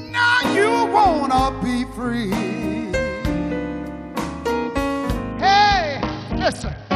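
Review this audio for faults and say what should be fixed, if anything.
From 5.32 s to the end, the treble dulls and gritty noise rises: a Bluetooth SBC bit pool drop, sounding like a fall from about 31 to 7, near 61 kbps. Reduce radio congestion or hold a higher minimum bit pool so the link never starves the encoder.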